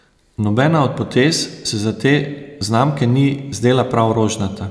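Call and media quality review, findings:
No faults found: the speech signal holds steady level and continuity throughout, with nothing audible in the capture, processing or transport path that calls for action.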